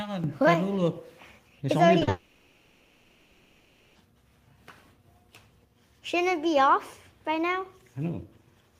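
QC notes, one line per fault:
1.99 to 2.09 s, short concealed packet loss: two brief smears back to back, 20 ms then 40 ms, where the sound wobbles before carrying on. The missing slices were patched by extending the preceding sound and blending back into the real signal.
2.09 to 3.97 s, long network dropout: for about 1.9 s the sound turns into a drawn-out, fading buzz and hiss with no real content, then the genuine audio returns further on. This is likely a network outage that the receiver covered by continuing the last sound.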